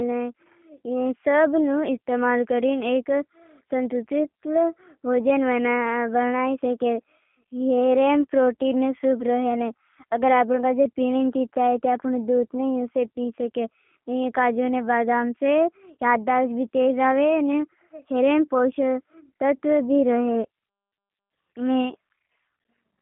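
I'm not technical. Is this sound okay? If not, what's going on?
No, not quite. The whole clip has been squeezed through the G.729 codec, the compact format many internet phone systems use. It rebuilds the speech from a rough model of the voice rather than keeping the actual sound, so everything comes out slightly rough and a bit synthetic. It also keeps only a narrow phone-line slice, roughly 200 Hz up to 3.5 kHz, which is why the speech sounds thin and boxy, like a call.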